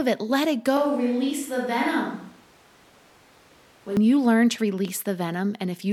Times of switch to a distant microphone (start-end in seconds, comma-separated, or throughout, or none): 0.77-3.97